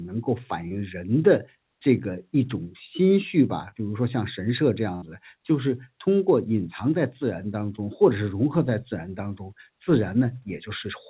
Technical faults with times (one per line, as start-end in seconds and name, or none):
0.68-0.72 short concealed packet loss
3.68-3.74 short concealed packet loss
4.96-5.04 burst of packet loss
7.76-7.80 short concealed packet loss